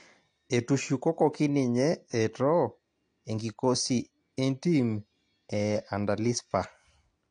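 From start to finish the speech sounds dull and smeared, with nothing above 9.8 kHz and a fizzy, warbling edge on sibilants. This is AAC compression, likely AAC-LC at a low bitrate around 32 kbps, coarsely quantising the spectrum and cutting off the top band.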